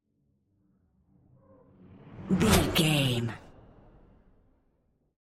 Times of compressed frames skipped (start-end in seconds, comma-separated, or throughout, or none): none